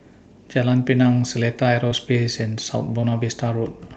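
Speech carried over a call link shows two instances of short concealed packet loss, at 1.87–1.93 s and 3.01–3.05 s. Roughly 40 ms and 20 ms of audio arrived too late. The receiver bridged each gap by extending the preceding sound, heard as a brief smear. On a spectrogram these appear as harmonics or noise stretched flat, ending in a soft crossfade.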